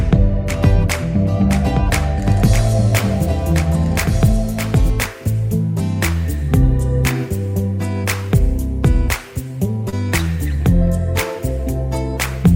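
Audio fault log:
0.0 to 4.9 s, doubled audio track: already under way when the clip begins, a second full-band copy trails the sound by about one and a half seconds at about 5 dB lower, with no decay or room colour, and stops abruptly at 4.9 s. Likely a second, slower capture path or an edit holding two copies out of step.
9.89 to 9.94 s, short concealed packet loss: about 20 ms of audio never reached the decoder in time, and the receiver bridged a 28 ms stretch by extending the preceding sound before blending back, leaving a brief smear or wobble.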